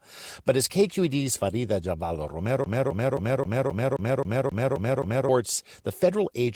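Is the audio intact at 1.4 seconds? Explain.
Yes, at 1.4 seconds the speech is intact, with no dropout, click or other fault at that point.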